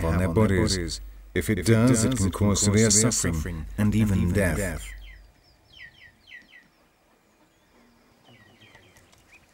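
Throughout the clip, a second copy of the same audio is likely being captured by a slower path and mixed back in, producing a doubled audio track. The copy trails the original by around 200 ms and sits roughly 5 dB quieter, with the full frequency range intact. Because it carries no decay or room colour, it doesn't blend like reverb. Every sound is followed by a distinct, flat repeat a fifth of a second later.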